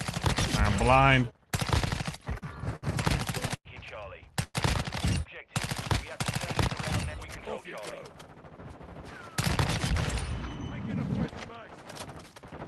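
A call-path recording, passed through Opus at a level consistent with roughly 32 kbps and band-limited to about 12 kHz, showing four jitter-buffer faults. From 1.89 to 2.84 s there are repeated stalls (stutter). The audio stops and restarts seven times, adding about 149 ms of filler. The longest hold is 65 ms, and about 16% of that stretch is concealed. Packets were reaching the receiver later or more slowly than playback consumed them, so the buffer kept draining, and each time the last sound was extended, fading during the longer waits. Nothing is lost, but the passage drags and jerks. At 3.56 to 3.67 s a short stall from a late packet holds one sound for about 93 ms, with a slight buzz or dip. A single packet missed its playout time, the buffer emptied, and the receiver stretched the preceding audio until the packet arrived. Playback then resumed where it had stopped, leaving the timeline 93 ms later. 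From 4.43 to 4.56 s comes a call audio freeze. The sound continues as a decaying buzz or hiss for about 111 ms, the final 20 ms of it silent, before the audio picks up again from the same point. The likely cause is packets held up in transit, which leaves a gap inserted into the audio rather than anything removed. Between 7.18 and 8.22 s a jitter buffer speed-up plays the audio at about 112% of normal rate with unchanged pitch, so it sounds hurried. The buffer was holding more audio than its target, and to shed the excess latency the receiver cut many short pitch-period-sized pieces in succession, about 150 ms in total.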